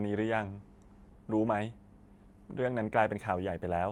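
A short speech recording carries clock drift between sender and receiver: the sending clock runs around 4 percent fast, so the receiver's buffer keeps filling and must shed material. The result is repeated timing corrections from 0.13 s to 3.75 s, small cuts that push the effective speed to 104 percent, heard as faint hiccups and a slightly unsteady pace.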